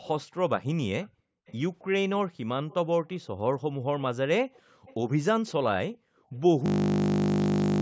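Echo leak in this speech clip at 0.02–1.56 s, 2.69–3.19 s, 4.53–4.94 s and 5.47–5.97 s: a faint copy of the voice trails 399 ms behind, roughly 25 to 30 dB down, likely loudspeaker sound that slipped past the echo canceller. Background gated by the echo canceller at 1.09–1.46 s, 4.62–4.85 s and 5.97–6.32 s: the room tone dips by about 40 dB while the canceller clamps the microphone, then returns. A system hang loop runs from 6.66 s to the end: a single 20 ms piece of audio repeats over and over, producing a steady 50 Hz buzz and replacing about a second of sound.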